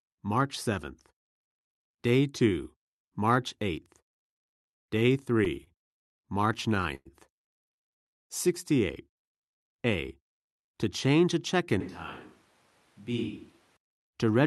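Speech heard over a call connection, with four separate faults. From 4.99 to 6.12 s there are repeated stalls (stutter): seven brief holds, the longest 63 ms and about 136 ms in total, where the last sound is stretched while the jitter buffer runs dry again and again because packets keep arriving late. Nothing is lost, so the sentence drags and judders rather than skipping. The many short holds are what set it apart from a single freeze.

At 6.95 to 7.08 s a call audio freeze puts one 104 ms hold into the audio. The last sound carries on as a fading buzz and ends in about 20 ms of silence before speech resumes exactly where it stopped. Its likely cause is a single burst of network delay that emptied the buffer once. That one longer gap, with silence at its tail, distinguishes it from the stutter before it.

From 9.80 to 10.45 s a jitter buffer speed-up makes speech run about 11 % fast while the pitch stays put. 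The receiver is trimming away roughly 70 ms of pitch periods to shrink an overfull buffer. It sounds hurried, not chipmunk-like, and that unchanged pitch is what separates it from a simple playback-rate error.

From 11.81 to 13.76 s there is a switch to a distant microphone. The voice abruptly turns roomy and hollow, thinner in the bass and around 10 dB quieter, with room noise only some 30 dB below the speech. Both the change and the return are sudden, which points away from a gradual gain drift or a codec fault. The clip's top end, limited near 12 kHz by the Opus call path, sits under all of this.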